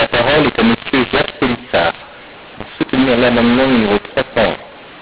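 Speech heard through a telephone band, with nothing above 4 kHz, which fits 8 kHz G.711 coding. Throughout, a mu-law and A-law mixup is audible: samples encoded with the mu-law curve are decoded as A-law, scrambling levels, so the speech is harsh and distorted and pauses fill with noise.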